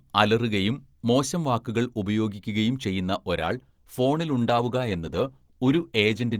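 A speech clip whose quality drops abruptly at 3.41 s, right after "മോശം വാക്കുകൾ ഉപയോഗിക്കുകയും ചെയ്യുന്ന", and stays degraded to the end. There is no gap or dropout, just a sudden change to a more artefact-laden sound. This is an adaptive stream at a lower bitrate: the player switched to a cheaper version of the stream mid-playback, most likely because the connection slowed. The change in quality points to a step from roughly 64 kbit/s Opus down to about 16 kbit/s Opus.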